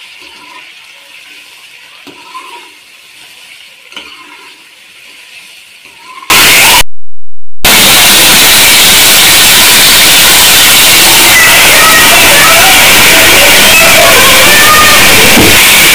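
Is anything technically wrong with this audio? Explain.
Yes. From 6.3 s to the end, the sound turns into very loud, harsh distortion. Quiet stretches become as loud as everything else. The likely cause is signed and unsigned mixed up in the 8-bit samples. Flipping the top bit turns each zero crossing into a full-range jump.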